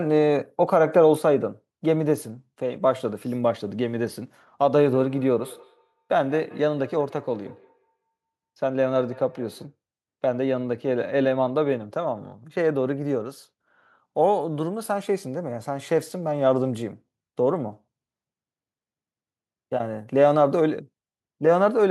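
From 4.94 to 9.76 s, a second device on the same call in the same room replays what this microphone sent, and the microphone picks that playback up again. The local echo canceller only removes its own device's output, so this loop survives. The result is a feedback echo between two devices: the speech comes back roughly every 150 ms, thinner and with a ringing edge, peaking at about 21 dB below the direct speech.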